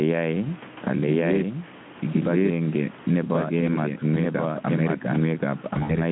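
From the start, the speech is heard twice: a second full-band copy runs roughly a second behind and at about the same level. This is a doubled audio track, likely from a second, slower capture path mixing the signal in again. Unlike an echo or room reverberation, the copy has no decay and no added room colour. It is a clean, equally loud repeat at a fixed offset, so the two streams clash.

Also throughout, the level breathes as gain pumping. The input gain appears set far too high, and a fast limiter pulls it down by something like ten decibels whenever the speech gets loud, then lets it recover. Loud and soft passages sit unnaturally close together. The moving level distinguishes this from a simple gain that is static or too low.

From 5.73 to 5.96 s, VoIP packet loss concealed by the speech codec breaks up the sound. About 80 ms went missing in gaps spread over 160 ms, the longest gap being 60 ms, which fits four lost 20 ms frames. 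Across the gaps, the Speex decoder stretches its last pitch and filter into a buzzy tone or coloured noise that fades. The sound then stays weak and smeared for a little while after packets resume. A clean dropout would fall silent, which is why this sounds different.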